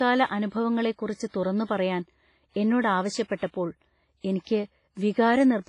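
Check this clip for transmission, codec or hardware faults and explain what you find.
Two codec faults are present in this speech clip.

WMA compression, throughout: nothing reaches above 10.5 kHz, with heavy ringing, washy hiss; likely WMA 1 coding at a low bitrate, fitting roughly 24 kbps.

Pre-echo, 4.41 to 4.47 s: block-wide quantisation noise spills about 56 ms ahead of a sharp attack, so a brief hiss precedes it and the onset sounds smeared.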